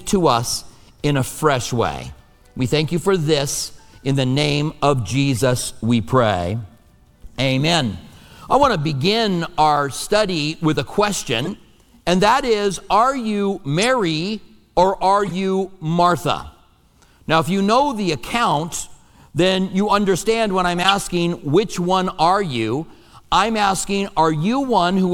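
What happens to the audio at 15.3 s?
At 15.26 to 15.32 s there is a corrupt frame decoded, lasting about 60 ms. Damaged bits in a short run of compressed frames, around four, were played by the decoder as if valid. Misread codes and gains put energy at the wrong frequencies. The result is a brief, harsh blip of chirpy noise. It peaks at about -15 dBFS, then stops as clean frames resume.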